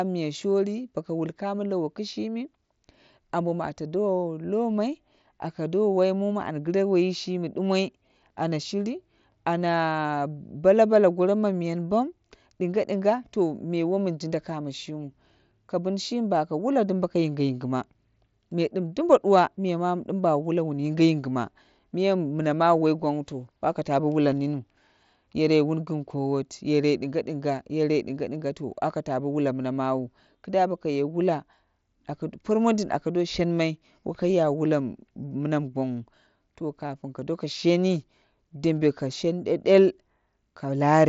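No technical faults turn up anywhere in this speech, which comes through a Bluetooth mSBC headset link with its usual top end near 7.7 kHz.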